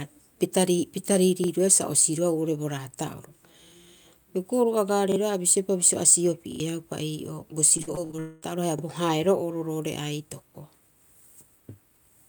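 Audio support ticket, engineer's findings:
Repeated buffer: short stutters at 1.44 s (right after "pita pita"), 3.68 s (right after "bo raata'oro"), 5.12 s, 8.79 s and 10.51 s, each one 40 ms slice played twice with hard joins, which fits a 40 ms playback buffer that underran. At 6.52 to 6.60 s the slice plays three times, losing about 70 ms. On a spectrogram, identical adjacent 40 ms blocks with vertical seam lines. On a waveform, copied segments and step discontinuities at each join.

Repeated packet loss (robotic sound): 7.77 to 8.20 s, choppy, with pieces missing. About half a dozen short holes, the longest 45 ms, patched by extending the preceding sound, with concealment covering about a third of the span. About 160 ms of audio is missing. On a spectrogram, smeared and frozen harmonic bands alternating with normal frames. On a waveform, repetitive periodic stretches broken by abrupt seams.

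Long network dropout: 8.20 to 8.44 s, directly after the choppy stretch. About 220 ms of audio is gone, and the last sound is extended as a fading buzz or hiss for the whole gap with no silence. The likely cause is a receiver jitter buffer concealing a stall in network delivery. On a spectrogram, a flat, stretched band that dims toward 8.44 s. On a waveform, a decaying periodic tail, then a hard resume.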